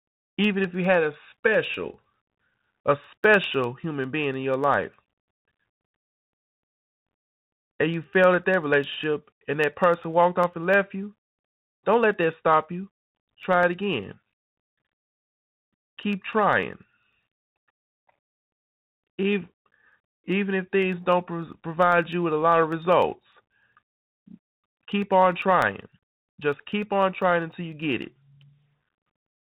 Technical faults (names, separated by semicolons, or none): Bluetooth CVSD headset codec; periodic USB or driver dropouts